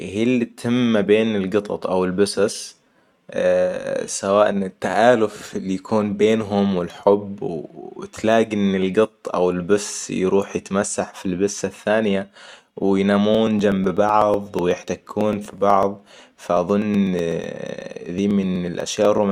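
From 13.35 s to 19.18 s, periodic USB or driver dropouts skip about a millisecond of audio every 0.124 s, some fifty times, giving regular ticks under the speech. The waveform shows tiny discontinuities; the spectrogram shows evenly spaced thin vertical broadband lines.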